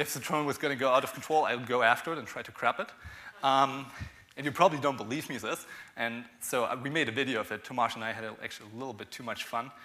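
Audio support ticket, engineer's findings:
No audible faults found on review; no dropouts, distortion, glitches or timing anomalies to attribute to any component.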